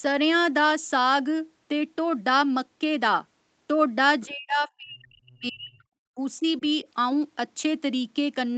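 Speech, carried over a call. At 4.21 to 4.26 s the other side's voice leaks through, faint and well below the talker, likely from loudspeaker echo the canceller missed. From 4.26 to 5.83 s the speech is suppressed in double talk, dropping very deeply. Shorter, shallower dips follow at 6.15, 6.38 and 6.6 s, likely from the echo canceller muting both voices at once.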